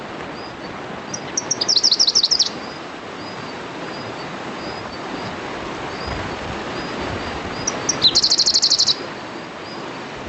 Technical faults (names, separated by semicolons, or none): gain pumping